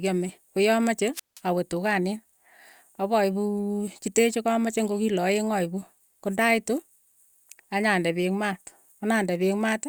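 A wireless microphone squelch dropout hits this speech clip from 1.13 to 1.40 s: the FM radio link fades, so the receiver's squelch mutes the output for about 172 ms before the sound returns.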